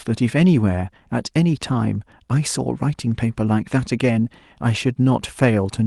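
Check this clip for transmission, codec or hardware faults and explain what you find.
No transmission, codec or hardware faults can be heard in this speech recording. It carries the mild coding texture of a call path, with the top end stopping near 12 kHz, which fits an Opus stream at around 32 kbps.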